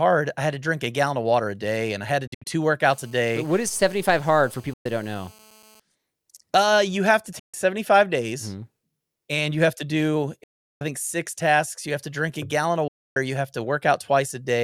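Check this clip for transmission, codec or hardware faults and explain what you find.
Two faults are audible: repeated gaps in the speech and a raspy buzz in the first half.

Bluetooth dropouts occur at 2.27–2.47 s (after "and I had to"), 4.73–4.86 s, 7.39–7.54 s (after "you have to"), 10.43–10.81 s and 12.88–13.17 s (after "drink a gallon of"). The speech vanishes and resumes further on, likely because packets reached the headphones too late and were discarded. On a waveform these are flat, abruptly edged holes. The first is broken into pieces, the longest about 70 ms. The longest overall, at 10.4 s, runs about 370 ms.

A GSM phone buzz runs steadily from 2.86 to 5.80 s at about 30 dB below the speech. It comes from rectified 217 Hz transmitter bursts and shows on a spectrogram as evenly stacked harmonic lines.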